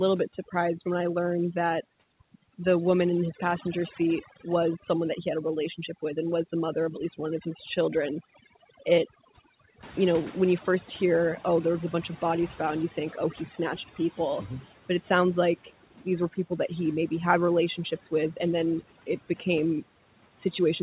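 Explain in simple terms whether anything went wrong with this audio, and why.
Overdone noise removal runs through the whole recording. The cleanup tool was set too strong, so it switches off parts of the sound it mistakes for noise. Quiet parts of the speech vanish with it, and the leftover background breaks into twinkling, warbling specks.

Noise suppressor catching up happens from 9.82 to 13.44 s, ending just before "snatched people". Around 10 s the room noise suddenly grows louder, and the cleanup tool needs about 3.6 seconds to adjust. The extra noise comes through with less reduction at first, then fades as the tool catches up.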